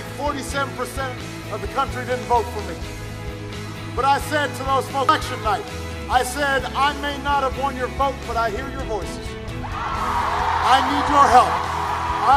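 At 5.09 s there's a quick glitch, and another at 11.59 s, both the signature of damaged data in a compressed stream. A stretch of the encoded bytes was wrong, so the decoder misread or threw out the frames there, lost its lock on the frame boundaries and went hunting for the next valid header. Each hit comes across as a short chirp, squawk, click or hole cutting into the sound.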